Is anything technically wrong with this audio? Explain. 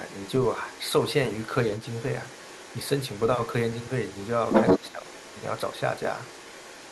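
Yes, two faults can be heard in this speech clip.

The other side's voice is leaking through from the start to 1.05 s, and again from 1.29 s to the end of the clip. The likely cause is that the talker's device plays the far end on a loudspeaker, and the echo canceller fails to strip that playback from the microphone signal. The result is a second voice running underneath the main talker, roughly 20 dB quieter.

Speech is suppressed in double talk from 4.79 to 5.06 s. With both sides talking at once during this stretch, the echo canceller likely cannot tell its own talker apart from the loudspeaker echo and attenuates everything together. The main voice dips by around 10 dB, and the losses add up to about a fifth of a second spread across that short span, so the talker briefly sounds pushed back.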